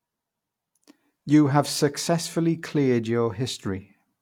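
No technical faults are audible anywhere in the speech recording.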